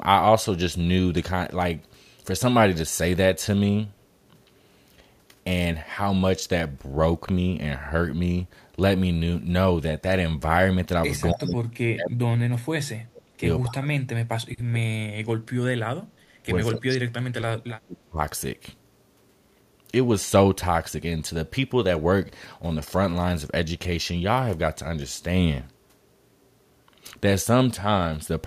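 From 11.33 to 13.45 s, 13.66 to 16.36 s and 16.72 to 18.19 s, the speech is suppressed in double talk: it sinks by up to about 35 dB and breaks up, likely because an echo canceller mistook it for loudspeaker echo while both sides spoke.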